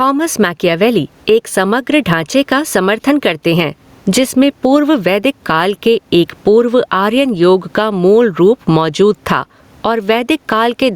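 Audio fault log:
throughout, gain pumping: the room noise is about 43 dB below the speech, and the gain swings by roughly 15 dB, likely a fast limiter fighting excessive mic gain. Unlike a noise gate, the background never drops out.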